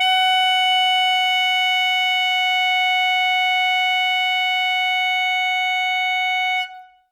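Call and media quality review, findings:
Music, whole clip: plainly audible ringing and washy smearing around attacks, with a hiss that breathes in step with the level. Content extends to about 20.1 kHz. Likely WMA compression: the transform codec's quantisation noise spreads over long blocks and weak lines drop out, consistent with roughly 48 kbps.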